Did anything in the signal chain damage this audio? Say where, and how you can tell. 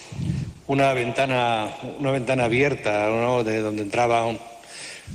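Yes. From 0.43 s to about 2.65 s the sound turns rougher and duller, with the top end thinned out and a watery, coarse texture, worst over a stretch of about 1.4 s before it clears. This is a call bitrate drop at the codec stage. The call's bandwidth estimate fell, so the encoder was told to spend far fewer bits. The quality loss fits a fall from around 32 kbps to 16 kbps, coarser coding, and trimmed high frequencies until the rate recovered.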